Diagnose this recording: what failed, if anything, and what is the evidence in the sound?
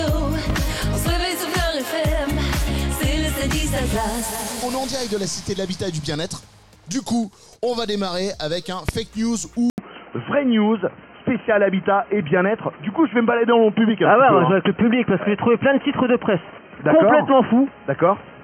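Two loud pops sit in the analogue wiring stage. The first spans 0.50 to 0.52 s and peaks about 10 dB above the surrounding sound. The second, at 8.89 to 8.91 s, is louder, about 20 dB above it. Each is a single sharp thump laid over the audio, which continues underneath without a break. The cause is likely a voltage step from a plug, switch or static discharge, shaped briefly by the circuits downstream.

At 9.70 s the input switched to a poorer device, and it stays there to the end. The change sits in the input or driver stage. An 80 ms silence marks the handover. After it, nothing reaches above 3.1 kHz, so the sound turns dull and boxy. The level shifts by about 5 dB. A new noise floor appears, about 30 dB below the signal. The likely cause is the system moving to another microphone or a headset call profile mid-recording.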